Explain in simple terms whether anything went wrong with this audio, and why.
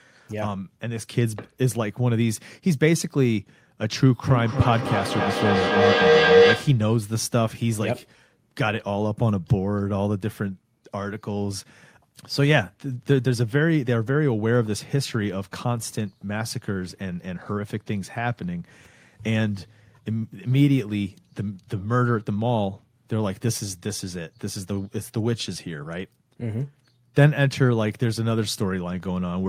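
Something did go wrong: a feedback howl runs from 4.27 to 6.91 seconds. Two devices in the same room were on the call, so the sound looped from loudspeaker back into microphone, getting louder each trip. Unlike an ordinary echo, which repeats and fades, these repeats grow and narrow into one low-pitched tone, around 500 Hz, with the loop coming round roughly every third of a second, and ending up louder than the speech itself.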